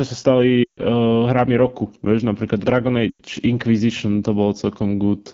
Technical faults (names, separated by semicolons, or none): AMR wideband (HD Voice) codec; lost AMR speech frames